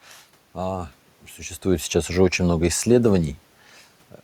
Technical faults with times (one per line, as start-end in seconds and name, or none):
1.66-3.40 automatic gain falling